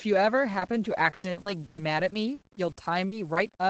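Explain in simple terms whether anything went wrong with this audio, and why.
Two things went wrong here.

The first is low bit depth without dither, and it runs through the whole clip. The speech has a fine grainy fizz that rises and falls with the voice, and it's roughest in the quiet moments and tails where the sound thins out. That sound points to audio stored with very few levels, likely around 8 bits, where each value was simply rounded to the nearest step with no dither to hide the error.

The second is repeated packet loss, the robotic sound, from about 0.53 s to 3.38 s. The audio came over a call connection, and during that stretch pieces kept going missing, around eleven times, the longest gap being about 120 ms. Each time, the system patched the hole by stretching out the last bit of sound it had, so about a fifth of that stretch is filler. That's what makes it choppy, with pieces missing.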